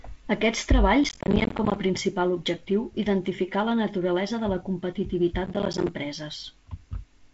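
Speech, carried over G.722 wideband telephone coding with a light upper-band hiss and nothing above about 7.7 kHz, is hit by processor overload crackle from 1.04 to 1.76 s, just before "a principal objectiu identificar", and again from 5.45 to 5.89 s. Missed deadlines leave short silent dropouts, spaced in a way that fits buffers of around 10 ms. The waveform shows a row of flat gaps with hard edges, and the spectrogram shows matching vertical broadband streaks.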